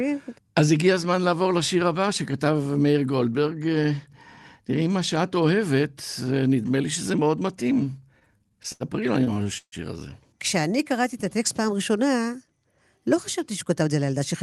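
Speech, carried over a call link whose codec cuts the highs at about 12 kHz, with timing faults from the jitter buffer. The first is repeated stalls (stutter), in two bursts. From 8.19 to 8.83 s there are seven short gaps, the longest 81 ms. About a quarter of that stretch is concealment. From 9.24 to 9.75 s there are four gaps, the longest 146 ms, filling about 39% of it. Packets came late, so the buffer kept running dry. The receiver stretched the last sound over each wait. Nothing is lost, but the speech drags and stammers. Next comes a jitter buffer slow-down from 10.62 to 11.27 s. Speech runs at 93% speed with pitch unchanged. Sounds are drawn out. The buffer was low, so the receiver rebuilt its reserve. It repeated single pitch periods and bits of pauses, adding 51 ms in total. Last is a jitter buffer speed-up from 13.38 s to the end. Speech runs at 107% speed, again at the same pitch, and sounds hurried. 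Here the buffer held too much audio, likely after delayed packets arrived in a bunch. The receiver cut tiny slices of one or a few pitch periods, removing about 70 ms.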